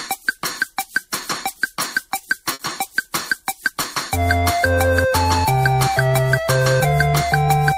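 At 2.53 s a burst of packet loss interrupts the audio for about 60 ms, ending at 2.62 s. Several consecutive packets never arrived in time, so the receiver concealed the gap by extending the last received sound and lowering its level as the dropout continued. This is heard as a short, fading smear where fresh audio should be. Playback then resumes further along, skipping roughly 60 ms of the original signal.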